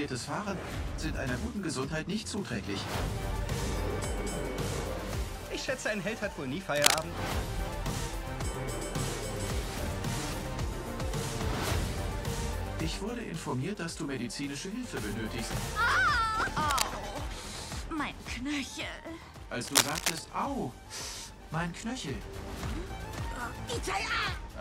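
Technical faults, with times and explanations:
6.76–7.02 s, 16.65–16.82 s and 19.64–20.18 s, cable scratch noise: short bursts of rough scratching sit around or a bit above the sound's level, likely a worn cable or connector getting moved.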